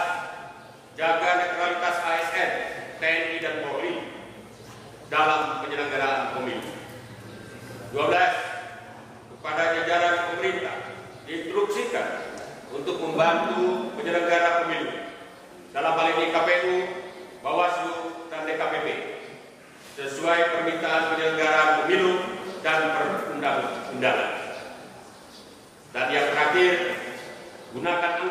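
From 1.43 s to 27.45 s there's a tick every 2.0 s, around fifteen of them, from periodic USB or driver dropouts. Something stalls the bus or driver on a fixed cycle, and each time roughly a millisecond of audio drops out to silence, so it clicks.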